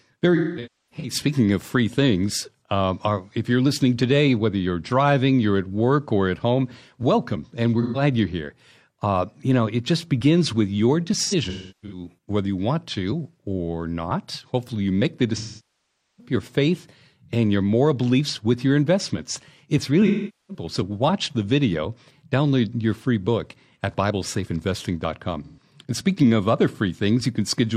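AAC frame loss with concealment hits this speech at 0.35–1.14, 7.82–8.02, 11.23–12.06, 15.37–16.33, 20.06–20.64 and 25.44–25.62 s. The decoder fills dropped frames from the last good spectrum, so the short gaps sound smeared and phasey, while at 15.37 s 0.81 s of frames are lost within a span just under a second.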